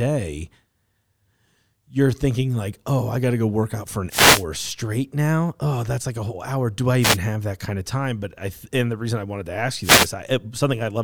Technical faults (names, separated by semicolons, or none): wireless microphone noise hit